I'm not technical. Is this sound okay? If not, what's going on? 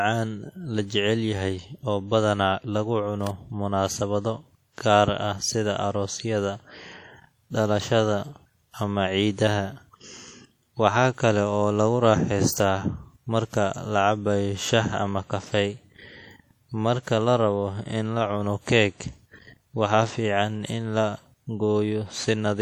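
No. Throughout the recording the speech has plainly audible WMA compression damage, likely from saving it as a Windows Media file at low quality. Voices sound washy and ringing, with a hiss that rises and falls with the speaking. That is different from steady background noise, which would stay constant.

At 3.27 s there is an electrical switching spike, likely a nearby switch or static spark. It is a sharp snap or tight cluster of clicks laid on top of the speech. Nothing drops out, which is what sets it apart from a gap or glitch in the recording.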